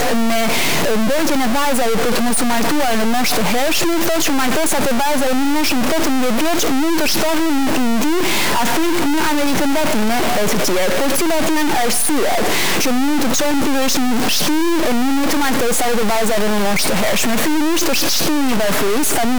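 Throughout, harsh buzzy distortion and noise-filled pauses point to a likely stuck bit; the waveform jumps in steps of about -10 dBFS, smearing broadband energy across the spectrogram.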